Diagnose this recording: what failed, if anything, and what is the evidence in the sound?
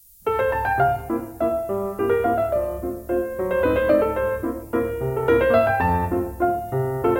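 Low bit depth with noise shaping runs through the whole recording, and it points to a sample-format conversion stage. A steady, thin hiss sits under the sound from start to finish, roughly 25 dB below the signal, and it climbs sharply toward the top of the band. The signal has been requantised to about 9 bits. Noise shaping fed the rounding error back so that it was pushed up into the high frequencies instead of spreading evenly.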